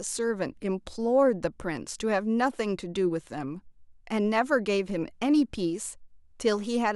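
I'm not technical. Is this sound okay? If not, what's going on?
Yes, the sound is okay, with no technical problems to point out in this speech clip. There is nothing here that needs fixing.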